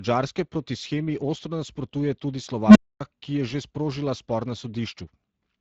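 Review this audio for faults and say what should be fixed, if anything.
Speex codec damage runs through the whole speech clip and is plainly audible. The voice has the noisy, hoarse grain of a CELP coder that spends too few bits on the excitation signal, which fits Speex at around 20 kbps. To prevent it, raise the Speex quality setting or use a modern speech codec such as Opus.

An unstable filter strikes from 2.67 to 3.01 s. A low tone near 200 Hz swells over about 80 ms as the recursive filter's feedback grows without limit, clips, and then overflows into roughly 255 ms of dead silence until the filter resets. To prevent it, validate the filter coefficients so every pole stays inside the unit circle, and guard the filter state against runaway growth.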